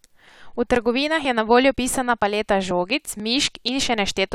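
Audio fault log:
0.28, 0.76, 1.25, 1.74, 2.22, 2.71, 3.20, 3.68 s: audio missing between chunks. Tiny skips recur evenly, about every half second, with no silent gap, which sets them apart from random dropouts. The likely cause is a very short piece lost at each 0.5 s chunk boundary.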